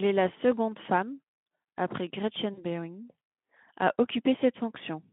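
VoIP packet loss concealed by the speech codec occurs from 2.54 to 2.65 s, just after "la seconde femme après". About 40 ms of audio went missing, which fits two lost 20 ms frames. The Speex decoder filled the gap by repeating its last pitch and spectral shape at falling gain, so the sound smears into a brief buzzy tone or coloured noise that fades. Because each decoded frame builds on the previous one, the speech stays weakened and distorted for tens of milliseconds or more after the packets return. Around it, the speech is narrowband at about 150 Hz to 3.5 kHz, with light Speex coding roughness.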